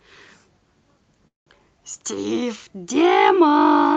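At 1.27 s the speech stalls in a call audio freeze lasting until 1.48 s. The likely cause is delayed packets emptying the jitter buffer. The final sound is briefly stretched, then about 170 ms of silence follows. Nothing is lost; later audio arrives about 0.19 s late. On a spectrogram, the frequencies of that final sound fade out before a blank column.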